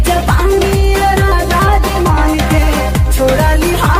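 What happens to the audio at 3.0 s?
Nothing goes wrong at 3.0 s; the audio there is intact, with no dropout, click, distortion or other fault to be heard.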